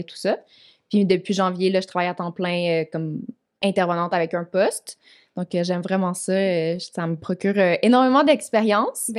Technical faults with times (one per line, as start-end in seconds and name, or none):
none